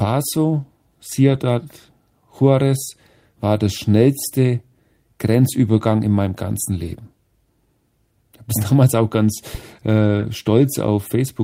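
Right at 1.29 to 1.35 s there's a lost packet rebuilt from error correction. The receiver didn't get the audio, but the next packet carried a low-bitrate spare copy, and the decoder played that instead. There's no gap, just about 40 ms that sounds rougher and a bit noisy, which fits two packets' worth. The same thing happens at 3.55 to 3.57 s, right before "der schnellste", and at 5.77 s, just ahead of "in meinem ganzen". Each of those is a single 20 ms grainy patch. The longest one is at 6.83 to 6.93 s, after "in meinem ganzen", where about 60 ms is rebuilt, likely three packets in a row.

At 10.19 to 10.23 s there's a short concealed packet loss. Here 20 ms never arrived, and the decoder had no spare copy for it. It filled the hole by extending the last bit of sound and then blending back into the real audio, which comes across as a quick smear. Overlapping the end of that, at 10.21 to 10.23 s, another 20 ms is rebuilt from the error-correction copy, so the roughness runs straight on from the smear.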